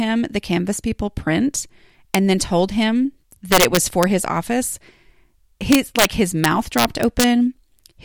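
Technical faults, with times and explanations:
2.15 s, 3.52–4.03 s, 5.72–6.05 s, 6.44–7.24 s: integer overflow. Peaks overshot the integer range by about 1, 5, 3 and 2 dB and wrapped to the opposite sign instead of limiting, giving violent cracks sharper than clipping; the first precedes "and then told him", the second ends before "his office".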